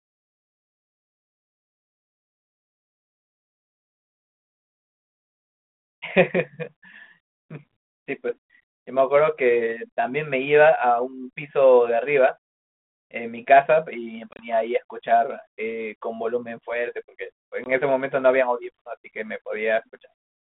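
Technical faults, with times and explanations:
14.31–14.46 s and 17.64–17.70 s, packet loss on an ADPCM call: hard-edged silent holes, about 60 ms scattered over 80 ms, then 20 ms. Unlike a plain dropout, speech returns slightly distorted for tens of milliseconds while the decoder's predictor and step size resynchronise.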